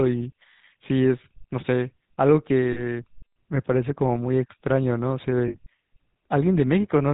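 Throughout, the speech carries the buzzy, gravelly roughness of the GSM full-rate codec, at a level that fits the 13 kbps full-rate coder. The coder models the vocal tract and excites it with a regular pulse train built from every third sample, so harmonics turn grainy and nothing survives above 4 kHz. Unlike plain low-bitrate MP3 smearing, the damage here is a rasp fixed to the voice itself rather than a watery swirl.

Lost GSM frames appear from 2.72 to 3.04 s, about 40 ms of missing signal. The decoder fills the gap by repeating the last good frame's settings, so the sound hangs as a brief metallic ring. A second loss from 5.48 to 5.55 s, about 60 ms, rings the same way and slightly longer. Packet-loss concealment in a waveform codec tends to click or stutter, while this holds a tonal buzz instead.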